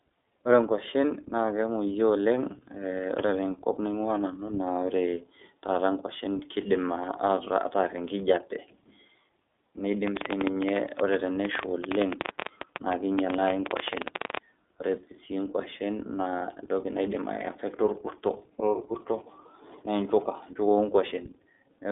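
What you've got is a speech recording that's been through the iLBC codec the whole way, and it's obvious. Everything above about 3.8 kHz is gone, and the band sits roughly between 300 Hz and 3.6 kHz, so it has that telephone-line squeeze. The voice comes through clearly but sounds a bit rough and synthetic, coded in 30 ms frames. The quality fits iLBC's 13.33 kbps mode. On top of that there's a train of clicks from 10.08 s to 14.38 s. It's an uneven ticking at about 12 per second, around fifty pops in total, and the louder ones stand maybe 15 dB above the speech. They keep going through the pauses too. They all have much the same shape, which likely points to interference from nearby equipment or a faulty connection or power supply.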